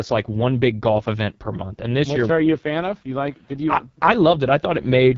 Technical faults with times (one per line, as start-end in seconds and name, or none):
0.00-5.18 AMR wideband (HD Voice) codec